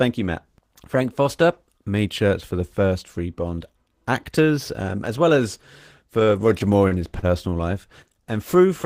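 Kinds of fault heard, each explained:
Repeated stalls (stutter): late packets drained the jitter buffer five times from 6.2 to 7.6 s; fills up to 37 ms appear as smeared spectrogram columns.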